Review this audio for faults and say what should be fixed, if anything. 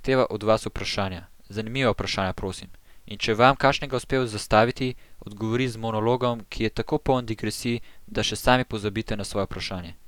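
Nothing stood out on listening, so there is nothing here that needs fixing.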